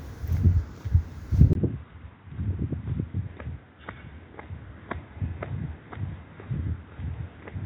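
At 1.53 s the sound cuts out for about 20 ms. When it returns, it is duller and boxier, and it stays that way to the end. Nothing above 3.8 kHz remains. The level drops by roughly 10 dB. A new background noise sits around 30 dB below the signal. This is likely an input switched to a poorer device, such as another microphone or a headset's call profile, which passes a narrower band and adds its own noise.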